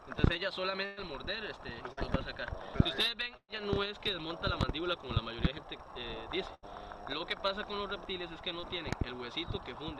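At 0.85 s a burst of packet loss takes out about 120 ms of audio. The receiver covers roughly 113 ms of it by extending the last sound and fading it down, so a held buzz or thinning hiss is heard until 0.99 s, and the material resumes with that stretch missing. At 1.93 s a short concealed packet loss of about 40 ms is patched until 1.99 s by synthesis from the preceding signal, blended back in and heard as a brief smear. A second burst runs from 3.37 to 3.50 s, again dropping about 120 ms. Here the concealment fades out completely, leaving roughly 50 ms of silence before the audio returns. A third burst from 6.54 to 6.64 s removes about 80 ms, filled with a decaying continuation. At 8.60 s a second short concealed packet loss, only about 20 ms, passes as a small smear or wobble, ending by 8.65 s.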